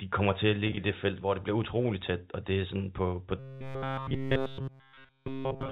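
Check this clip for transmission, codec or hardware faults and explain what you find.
Two faults are audible, both in a speech clip carried over G.711 mu-law telephone coding, which limits the sound to below 4 kHz.

Packet loss with pitch repetition appears from 0.67 to 0.77 s, between "de kommer til at" and "i det felt hvor". About 70 ms went missing, scattered over 100 ms, with no gap longer than 20 ms. The receiver bridged each gap by repeating the last pitch period, so these short losses sound like a held, buzzy tone.

Robotic sound from repeated short buffers runs from 3.39 s to the end, starting after "er sådan på på". The sound becomes a rigid, metallic buzz at 134 Hz throughout. The likely cause is the software looping the last 7.5 ms of audio while new audio arrived too seldom, which skipped the real signal.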